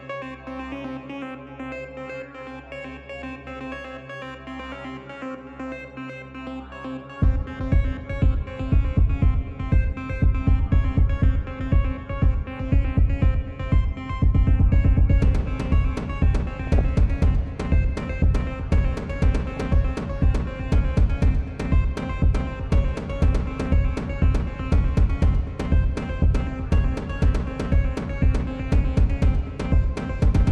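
Throughout the clip the sound carries MP2 compression, likely from MPEG Layer II coding squeezed to a low bitrate, with the damage plainly audible in a way that fits around 80 kbps. With so few bits to share among its 32 sub-bands, the encoder drops the upper bands and quantises the rest coarsely. The result is dull and lacking top end, with a gurgling, granular roughness and a high region that flickers in and out.

At 16.64 to 16.81 s, and again at 19.56 to 19.61 s, DAB burbling breaks through. Bit errors at a rate of a fraction of a percent have slipped past the error correction into the audio data, corrupting samples. The first burst spans several frames, the second a few. Wrong samples put short blips of noise into single sub-bands, producing brief burbling over the programme.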